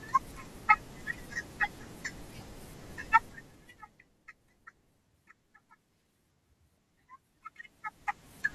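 From 7.33 s to 8.54 s, a gain change of roughly 20 dB is applied in unsmoothed 1 dB steps, about twenty per second. Each jump leaves a small click, producing zipper noise: a rapid ticking that rides on the speech as the level moves.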